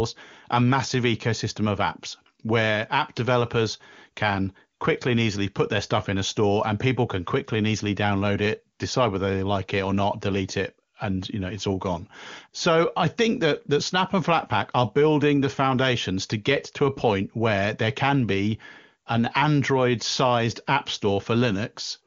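No technical faults can be heard anywhere in the speech. The sound comes through the AMR wideband (HD Voice) codec with at most faint coding traces and clear speech with a band up to about 7 kHz, which fits one of its highest rates, around 23.85 kbit/s.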